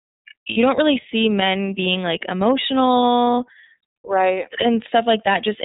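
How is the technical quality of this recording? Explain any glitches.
Technical quality is limited by narrowband coding, plus one brief dropout. Throughout, the speech has the iLBC codec sound: nothing above 4 kHz, and a slightly rough, synthetic edge that fits 30 ms iLBC frames at roughly 13.33 kbps. The coder rebuilds each frame's excitation independently, which causes that grainy texture. Plain band-limiting would sound dull but smooth, without this roughness.

From 0.50 to 0.58 s there are lost iLBC frames, about 60 ms of missing audio, consistent with two 30 ms frames. The decoder fills the gap by repeating the last pitch cycle mixed with noise, so it sounds like a held, faintly buzzy vowel rather than silence or a click. Speech recovers immediately afterward, without the smeared recovery of codecs that depend on previous frames.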